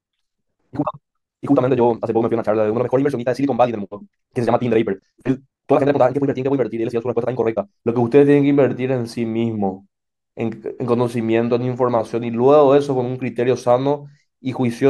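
From the start of the speech to 7.9 s there is a time-stretched section, played at about 1.95 times normal pace. The pitch stays where it should, so the change is not a simple speed-up. Instead, short pieces of the signal appear to have been dropped and the remainder joined to shorten the passage, which is likely software fitting it to a set length. The result sounds rushed, and the pace drops back abruptly at 7.9 s.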